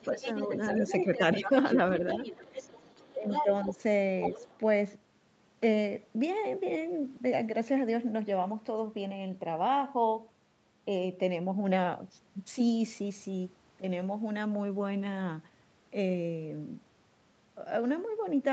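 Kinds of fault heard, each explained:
Speech suppressed in double talk: In three places within the first 4.4 s, from the start to 0.2 s, from 0.73 to 2.54 s, and from 3.16 to 4.4 s, the talker's level briefly sags while the other voice is present. The cause is likely an echo canceller turning everything down because it cannot separate the two voices. The drops are short, from a few dB up to roughly 10 dB in the last stretch. On a waveform the envelope shows brief notches, and on a spectrogram the harmonics thin or fade in short patches.
Other side's voice leaking through: From about 0.18 s to 4.6 s a second, weaker voice runs underneath the talker, sitting around 10 dB lower. It is likely the far end's audio picked up from the loudspeaker and not fully cancelled. On a spectrogram a faint second set of harmonic traces overlaps the main one.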